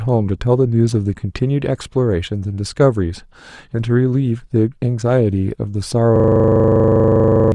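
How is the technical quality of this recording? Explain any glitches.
The recording has one serious glitch near the end of the speech. From 6.16 s to 7.52 s, the system hang loop fault appears: the computer or audio driver stalled while the sound hardware kept replaying the same 40 ms ring buffer. That single slice repeats 34 times at 25 Hz, so the speech is replaced by a rapid, rattling stutter close to a buzz. Roughly a second and a half of real audio is lost.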